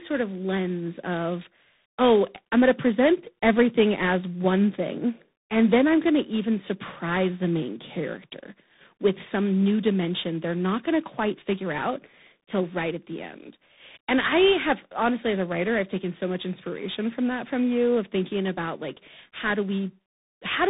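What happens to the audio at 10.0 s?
At 10.0 s the speech carries tandem speech coding, present throughout the clip. It was decoded and re-encoded by about three speech coders in sequence, likely two ADPCM-type stages and a CVSD stage. Each coder adds its damage to the last one's. The speech sounds rough and noisy, with nothing above 3.8 kHz.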